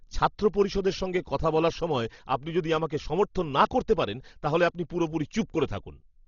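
Throughout, the speech is dull and rough. A spectrogram shows a hard 6.9 kHz ceiling and grainy noise fill, likely heavy Dolby Digital compression near 32 kbps.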